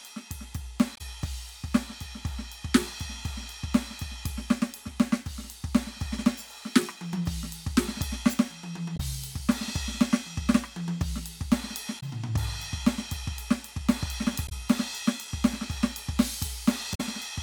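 Damaged data in the compressed stream of this music clip makes the decoder lose frame sync, causing brief blips at 0.93–1.01, 8.93–9.00, 11.96–12.03, 14.45–14.52 and 16.91–17.01 s.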